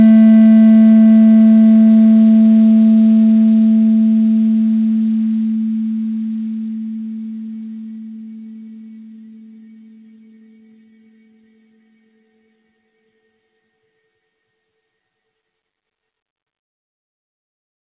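At 6.96 to 7.00 s, about 20 ms of audio never reached the decoder in time, a short concealed packet loss. The receiver filled the hole by extending the preceding sound for roughly 15 ms, then blended back into the real signal. The result is a brief smear where the sound briefly wobbles rather than dropping out. It sits within a band that stops at 4 kHz, which fits a G.711 mu-law call path.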